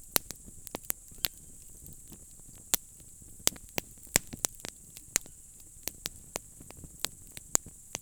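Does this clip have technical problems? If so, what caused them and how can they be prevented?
No, there are no technical problems to hear in this audio. With nothing gone wrong, there is no cause to trace and nothing that needs preventing.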